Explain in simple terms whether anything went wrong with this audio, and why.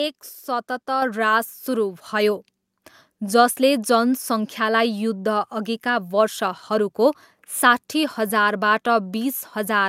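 At about 1.02 s, the microphone volume stepped up: the calling software judged the input too quiet and raised the microphone level in a single jump. The voice and the background noise both get noticeably louder at that same instant.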